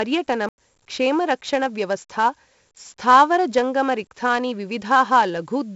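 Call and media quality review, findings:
4-bit ADPCM compression throughout, heavy: gritty hiss riding on every loud syllable, roughening consonant attacks, nothing above 7.7 kHz. 64 kbps points to 4-bit samples at 16 kHz. Unlike steady background noise, the hiss follows speech level and drops away in pauses.

Block of digital silence at 0.49–0.58 s (about 93 ms, fits a 4096-sample buffer) and 2.97 s (6 ms tick). Probable output buffer not filled in time. Hard cut to silence with no fade, unlike a faded or smoothed dropout.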